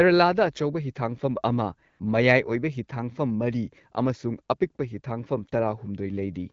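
At 1.89 s, for about 100 ms until 1.99 s, the speech drops out and AMR comfort noise takes its place. The sending phone's voice activity detection decided the talker had gone quiet and stopped transmitting speech frames, so the receiver synthesised a smooth, steady hiss from a rough level and spectral estimate. The real background vanishes for that gap, and the speech resumes abruptly. Around it, the light wideband coding is consistent with AMR-WB at about 12.65 kbit/s.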